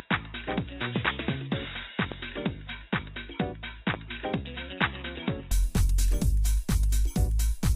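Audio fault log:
0.0–5.51 s, input switched to a poorer device: the sound is dull and boxy with nothing above 3.8 kHz, about 10 dB quieter and carrying a faint noise floor well below it, then opens up at 5.51 s without a gap, likely a narrower-band microphone or headset profile.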